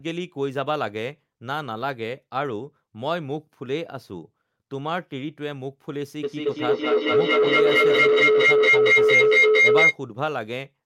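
At 6.23 s a feedback howl takes hold: two devices on the same call in one room form a loop from loudspeaker back into microphone, and each trip adds level. The repeats swell rather than decay and collapse onto a tone near 400 Hz, with the loop coming round roughly every fifth of a second, until 10.0 s. It peaks at about 10 dB above the speech. A spectrogram shows a bright horizontal band near 400 Hz. The waveform's envelope climbs steadily.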